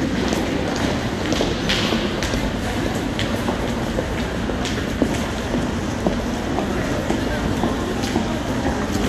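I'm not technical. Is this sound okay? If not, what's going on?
Yes, this one's fine; nothing in it sounds broken or glitchy, so there's nothing to worry about.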